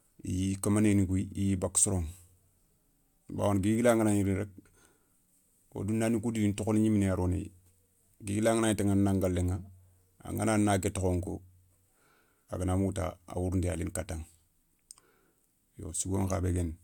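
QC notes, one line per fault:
No faults heard in this speech recording.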